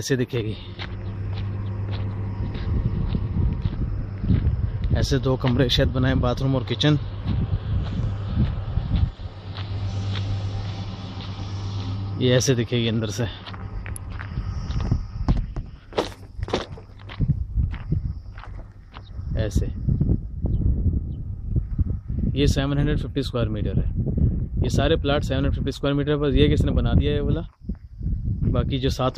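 At 13.96 s a single sharp snap of about -15 dBFS sits on top of the sound, an electrical switching spike likely from a nearby arc, not a gap-like digital dropout.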